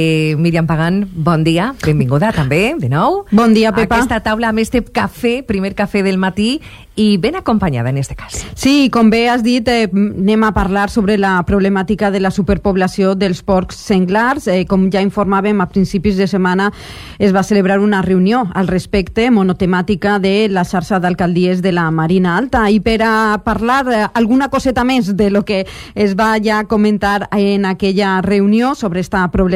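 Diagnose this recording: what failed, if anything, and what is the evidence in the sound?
Nothing failed; no stage shows any audible fault.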